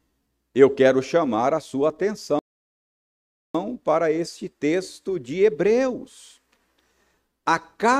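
At 2.39 s the speech cuts off mid-flow and the output stays silent until about 3.55 s, a gap of about 1.15 s, before resuming. This is a playback stall, likely the player running out of buffered data or its output thread being blocked.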